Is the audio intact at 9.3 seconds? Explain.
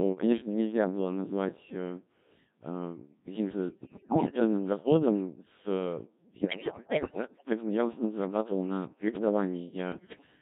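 No. At 9.3 seconds, as throughout the clip, the speech passes through a Codec 2 vocoder, which fits a rate near 1.3 kbit/s. Only pitch, voicing, energy and spectral shape survive. The decoder rebuilds the voice from sine waves. The result is heavily robotic and buzzy.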